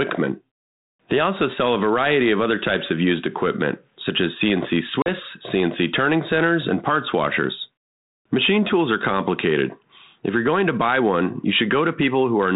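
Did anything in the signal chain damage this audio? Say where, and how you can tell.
Yes: at 5.02 s a hard-edged 40 ms silent gap appears, then the sound briefly recovers slightly distorted. This is network packet loss of roughly two packets, desynchronising the 32 kbit/s G.726 ADPCM decoder's predictor.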